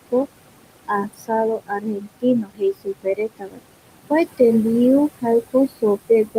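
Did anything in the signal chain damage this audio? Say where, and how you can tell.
Yes. Noise suppressor artifacts run through the whole clip, from the call-processing stage. The room noise sits about 13 dB below the speech, and the suppressor pulls it down by about 21 dB wherever it judges a band to be steady noise, frame by frame. The background drops away in the gaps and comes back under the speech.

Speech cut by the noise suppressor, from the same stage, occurs at 0.88 to 1.31 s, 1.56 to 3.62 s, and 5.43 to 6.37 s, just after "kua tembiu". Here the suppressor treated parts of the speech as noise and turned them down with the background, by as much as about 18, 22 and 15 dB. The longest stretch loses well over a second of material, and the other two lose a fraction of a second each. The softer sounds there come out swallowed and faint.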